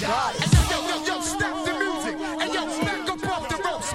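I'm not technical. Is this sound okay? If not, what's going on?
Yes, nothing in this recording points to a technical problem with how it was captured, stored or played back.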